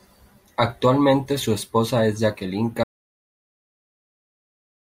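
Audio dropout to silence from 2.83 s to the end: speech cuts off into total silence without room tone, likely input lost while recording continued.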